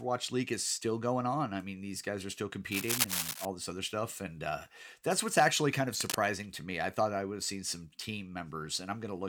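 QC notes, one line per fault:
2.71–3.45 s: cable scratch noise. Dense, uneven crackling bursts sit over the speech at roughly equal level, likely from a worn cable or connector being moved and its contact resistance fluctuating.
5.93–6.17 s: cable scratch noise. A shorter burst of the same rustling texture, somewhat below the speech, likely from a worn cable or connector being moved.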